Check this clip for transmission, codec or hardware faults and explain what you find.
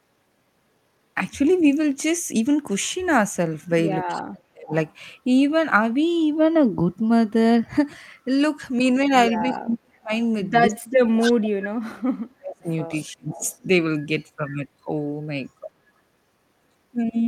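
Two echo-control faults are audible in the speech, both tied to a speakerphone-style echo canceller struggling while both ends talk.

Speech suppressed in double talk occurs at 4.08–4.73 s, 9.42–10.11 s, 10.69–12.11 s, 12.35–12.68 s and 13.08–13.44 s. The likely cause is the canceller failing to tell this talker from returning loudspeaker echo while the far side spoke, so it pulled everything down. The voice sinks by roughly 35 to 40 dB at its deepest. The longest stretch, near 11 s, loses about a second of speech.

Echo leak appears at 11.20–11.49 s, 12.95–13.12 s and 13.32–13.58 s. A delayed copy of the voice returns 280 ms late, likely because the loudspeaker side's canceller let part of its microphone pickup of the loudspeaker slip through and send it back. The first burst is strong, only about 5 dB under the speech. The later two are faint ghosts roughly 20 to 25 dB down, overlapping the suppression dips.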